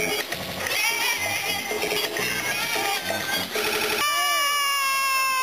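A repeated buffer occurs three times. Each time new audio arrived late, so the last block played again. Each repeat lasts about 85 ms, which fits a 4096-sample buffer. At 0.43 to 0.60 s the block plays twice more. At 1.88 to 1.96 s it plays once more. At 3.67 to 4.01 s it plays four more times. Each join is hard, so these are heard as short stutters. Some real audio is lost too, roughly 100 to 300 ms per event.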